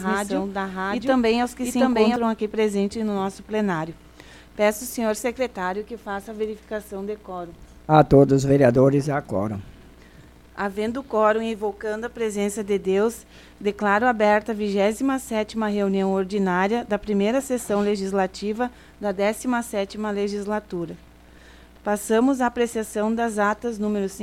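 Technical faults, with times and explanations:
0.00–2.16 s, doubled audio track. The clip opens already doubled. A full-band copy trails roughly 0.7 s behind, about as loud as the original, with no decay or room colour. It cuts off abruptly at 2.16 s. Likely a slower second capture path.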